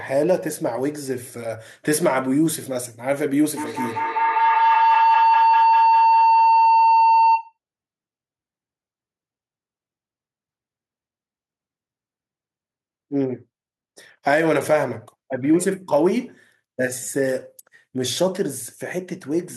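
A speech recording with a feedback howl from 3.57 to 7.57 s. Two devices in the same room are joined to one call. Sound from one loudspeaker reaches the other microphone and comes back louder on every pass. The repeats narrow to a tone near 1 kHz. The repeats come roughly every fifth of a second, the time of one trip round the loop. At its peak the howl is about 3 dB louder than the speech.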